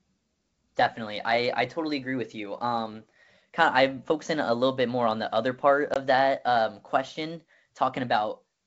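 Between "on the other part" and "that um question", at 5.94 to 5.97 s, the sound cuts to a hard-edged silent gap of about 20 ms and resumes briefly rough. This is packet loss on an ADPCM call. Roughly one packet vanished, and the decoder's adaptive state lost sync with the sender's.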